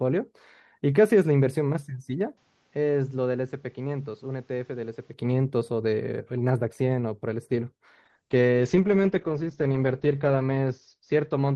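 Speech over an Opus call path shows two separate faults. From 2.37 to 5.13 s the sound dulls, loses everything above 7.6 kHz, drops about 5 dB and gains a new noise floor with no gap. That points to a likely input switched to a poorer device, since the changes in level and background noise rule out a codec effect. From 8.05 s to the end at 11.55 s, a call bitrate drop from 32 to 8 kbps turns the sound rough and muffled, with the band narrowing to 8 kHz and the lowest rate lasting 1.31 s. Unlike the device switch, the damage here is coarse coding grain.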